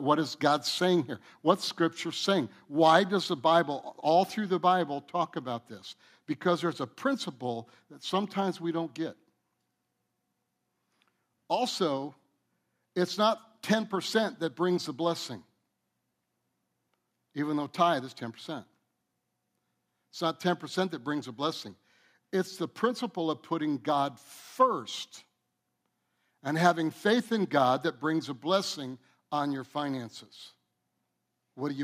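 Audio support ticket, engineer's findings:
Microphone volume stepped down, 2.40 s and 3.42 s (the second right after "does the"). Symptom: sudden drop of about 1 dB in speech and background together, no fade, level then holds. Probable component: call software's input gain control, likely reacting to a hot or clipping mic and stepping the device input volume down one notch each time. Two consecutive steps, about 2 dB total reduction.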